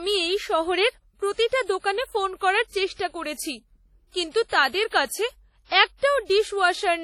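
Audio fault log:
throughout – WMA compression: heavily ringing, washy speech with hiss that breathes with the signal, likely from WMA near 32 kbps; spectrogram shows time-smeared noise, missing weak components, and nothing above 17.8 kHz.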